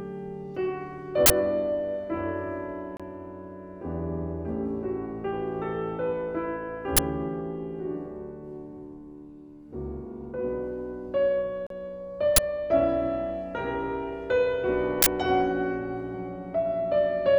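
At 1.26 to 1.30 s a 40 ms burst of harsh, loud digital noise cuts in. This is an uninitialised buffer: an audio block went to the output before anything had been written into it, so whatever values were left in that memory were played as samples. The same fault returns at 6.97 to 6.99 s and at 12.36 to 12.38 s as 20 ms bursts, and at 15.02 to 15.06 s as another 40 ms burst. The two lengths point to blocks of roughly 20 ms and 40 ms being played unfilled.

At 2.97 to 3.00 s the sound drops to silence for 26 ms and then resumes, and at 11.67 to 11.70 s it drops out again for 37 ms. These gaps fit a Bluetooth stall, likely caused by radio interference delaying packets until the headphones' receive buffer ran empty. Playback halted until the retransmitted data arrived, leaving brief silent holes.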